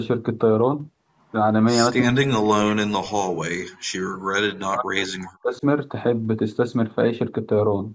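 From 1.98 to 3.29 s and again from 4.19 to 5.63 s, the speech sinks sharply, by up to roughly 40 dB. This is likely speech suppressed in double talk: with both ends talking, the echo canceller mistook this talker for loudspeaker echo and attenuated both. On a waveform the envelope collapses to near-flat stretches; a spectrogram shows the harmonics fading or gapping, against a band that already stops at 8 kHz.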